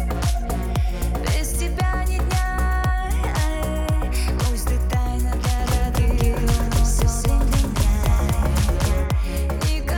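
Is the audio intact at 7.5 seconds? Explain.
No. From 5.60 to 9.04 s a doubled audio track plays, likely a second, slower capture path, adding an equally loud full-band copy about 200 ms late. The waveform and spectrogram show every onset repeated as a clean echo without decay.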